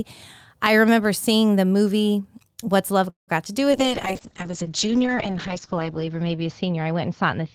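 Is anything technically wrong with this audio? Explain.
Yes, there are three problems from about 3.1 s onward in this speech clip.

A call audio freeze runs from 3.09 to 3.30 s. The cause is likely a stall in packet delivery that left the receiver's jitter buffer empty. The receiver extends the last sound for a moment, and it fades into about 140 ms of silence. Speech then resumes exactly where it stopped, so nothing is lost, but a gap of roughly 184 ms has been pushed into the timeline.

A short concealed packet loss follows at 3.44 to 3.48 s. About 20 ms of the call never reached the decoder in time. The receiver patched roughly 12 ms of that hole by carrying the preceding sound forward, then crossfaded back into the real signal. The result is a brief smear or wobble.

A call bitrate drop starts at 3.72 s and lasts to the end. The encoder's rate falls from 48 kbps to 7 kbps after the bandwidth estimate collapses, and it stays at its lowest for 1.86 s. 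At that rate Opus codes coarsely and narrows its audio band from 20 kHz to 8 kHz, so the speech turns rough, watery and muffled, with sibilance and airiness stripped away.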